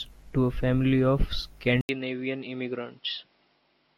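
Speech, and right after "to a family of" at 1.81 s there's an 80 ms gap, then it goes dull, nothing above 5.5 kHz, a bit quieter: likely an input switched to a poorer device.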